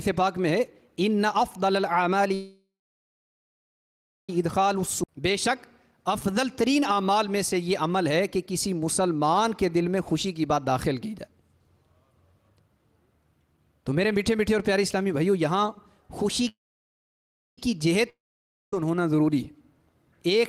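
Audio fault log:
2.34–4.30 s, call audio freeze: the last sound rings on as a fading buzz, then about 1.57 s of silence, likely packets held up in transit; it resumes where it stopped, nothing lost.
5.03 s, skip ahead: playback jumps straight forward, dropping roughly two seconds of audio, with the two sides joined almost seamlessly.
5.04–5.09 s, short stall from a late packet: a late packet leaves the buffer empty, so the sound is held about 40 ms too long with a slight buzz.
16.49–17.58 s, call audio freeze: another brief buzz fading into about 1.01 s of silence, likely a stalled jitter buffer; the audio picks up exactly where it left off.
18.09–18.81 s, long network dropout: a buzz that fades to about 0.55 s of silence, likely nothing arriving; about 0.63 s of audio is lost before it resumes.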